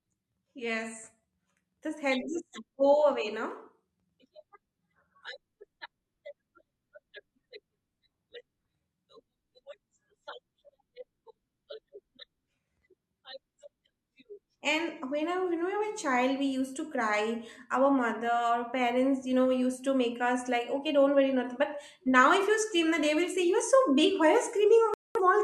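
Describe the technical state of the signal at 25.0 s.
At 25.0 s the signal is in a digital broadcast dropout, running from 24.94 to 25.21 s. The receiver stopped getting usable frames and muted its output until valid data resumed, so the speech drops to silence and about 213 ms of programme is simply gone, which fits roughly five lost frames. Unlike analogue fading, no hiss or noise rises as the signal fails. Unlike concealment, nothing is repeated or smeared across the gap.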